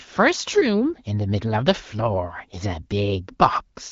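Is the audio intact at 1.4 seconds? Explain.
Yes, at 1.4 seconds the speech is intact, with no dropout, glitch or other fault at that moment.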